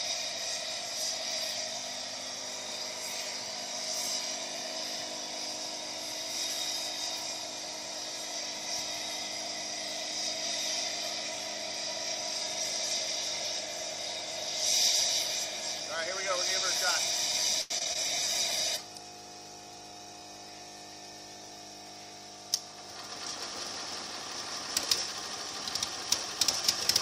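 From 17.61 to 17.97 s there is repeated packet loss with a robotic sound. Four gaps follow one another quickly, the longest 89 ms. Each is patched by stretching the preceding sound, so about 38% of that stretch is concealed and some pieces are simply missing. The choppy, stuttering texture sets it apart from plain dropouts.

At 18.01 s a call bitrate drop begins. The encoder falls from 128 to 16 kbps and stays at its lowest for 3.75 s before recovering around 24.02 s. The sound turns muffled and watery with the top end cut off. Unlike the packet loss, the degradation is continuous, with no holes.

Inside that span, from 19.69 to 20.21 s, a jitter buffer speed-up plays the audio at about 109% speed by trimming roughly 50 ms in small pitch-period pieces. It sounds hurried, but the pitch stays the same, which separates it from a resampling or pitch fault.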